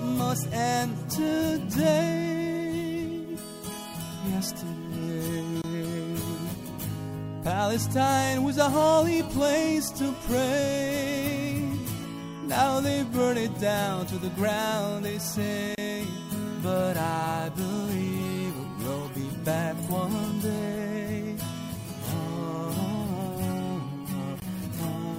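At 5.62 to 5.64 s, 15.75 to 15.78 s and 24.40 to 24.42 s the sound drops into a block of digital silence, gaps of about 23, 30 and 20 ms where output likely wasn't filled in time. Hard, unfaded edges cut the sound out and back, unlike a smoothed dropout.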